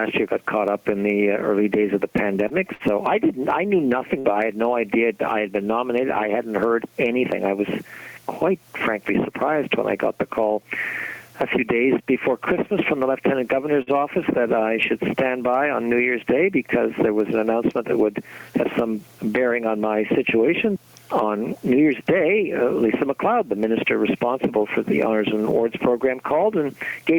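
Gain pumping runs through the whole clip, with the level swinging by roughly 10 dB. Loud and quiet parts sit closer together than they should, and everything feels squashed. The likely cause is input gain set far too high, with a fast limiter or compressor clamping down on each peak. From 2.17 to 2.83 s there's a stutter of repeated stalls. The jitter buffer ran dry three times in that stretch as packets arrived late, and each time the receiver held the last sound going until it could carry on. About 84 ms got filled that way, the longest wait around 56 ms, roughly 13% of that span. Nothing is actually lost, but the audio drags and hiccups. At 4.19 to 4.28 s there's a burst of packet loss. The receiver papered over about 54 ms by extending the last sound and letting it fade, then jumped ahead, so roughly 60 ms of the audio is simply gone. At 13.82 to 13.90 s there's a short stall from a late packet. 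Delivery delay jumped by about 48 ms, so the last sound was stretched for about 48 ms until the packet showed up, then playback picked up right where it left off. You hear one sound held a touch too long, with a faint buzz or dip, but nothing missing.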